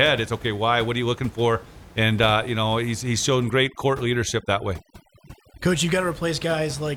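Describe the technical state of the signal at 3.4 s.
At 3.4 s the speech is inside a stretch of overdone noise removal running from about 3.29 to 5.74 s. The noise reducer is set so hard that any frequency band sitting near its noise estimate is pulled far down or switched off, taking the softer parts of the speech with it. The room noise, about 20 dB below the speech elsewhere, drops and breaks up into twinkling, warbling specks. On a spectrogram the background floor drops to black between scattered isolated dots, and speech harmonics look ragged with gaps. On the waveform the low-level stretches between syllables sit almost flat.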